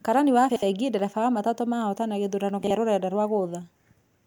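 At 0.50–0.63 s, and again at 2.64–2.71 s after "wa matatũ mahotana gĩthurano", frames out of order swap two neighbouring blocks (64 ms, then 32 ms), garbling the speech into a flutter. These show as waveform discontinuities and thin vertical spectrogram stripes.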